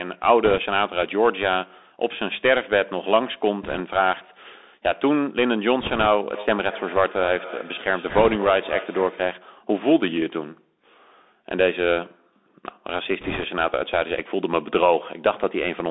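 Narrow, scratchy speech with a granular hiss runs through the whole clip, with s sounds gritty and loud peaks roughened. This is the Bluetooth CVSD headset codec: its one-bit delta coding can't keep pace with fast, loud changes, and the line passes only about 250 Hz to 3.7 kHz.

Brief bursts of rushing crackle, with no sharp clicks, come at 0.45–0.58 s, 3.63–3.81 s, 5.80–6.07 s, 8.09–8.36 s and 13.21–13.44 s. These are bit errors on a Bluetooth voice link. A few percent of bits flip, and because each bit carries little weight and errors fade, the damage spreads as noise rather than pops.

From 6.34 to 9.42 s, each phrase comes back thinner and ringing about a fifth of a second later, at about 16 dB below the speech. This is feedback echo between two devices: a second device on the call replays the audio into a microphone whose echo canceller can't remove it.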